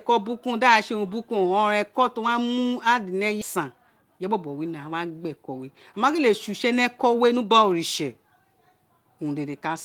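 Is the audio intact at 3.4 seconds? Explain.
No. At 3.41 to 3.43 s a skip ahead occurs: about a second of speech was discarded in transit or by an overflowing jitter buffer while later audio waited. Playback jumps forward with no gap, splicing the two sides together abruptly.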